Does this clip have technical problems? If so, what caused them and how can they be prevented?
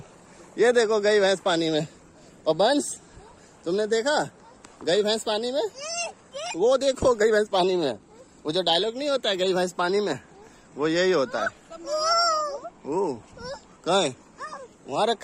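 Yes, there are two related problems right next to each other.

At 6.53 s there's a skip ahead: playback jumps straight forward with no gap filled in, and roughly 0.7 s of audio is simply gone. The two sides of the cut are butted together almost directly, so you hear the sound lurch rather than pause. That's a chunk of audio being dropped, either on the way or by the jitter buffer because it was overfull, while later material was already queued. A larger or better-managed buffer that drains gradually instead of dumping a block would prevent it.

Right after, from 6.63 s to 8.60 s, there's a jitter buffer speed-up. The audio runs about 110% of normal speed while the pitch stays put, so it sounds hurried for those two seconds. The receiver was still holding more audio than its target, so it kept snipping out tiny pieces a pitch period or so long, around a fifth of a second in total, to pull the delay back down. 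Smoothing out network delivery so packets don't arrive in bursts would keep the buffer from overfilling and needing this catch-up.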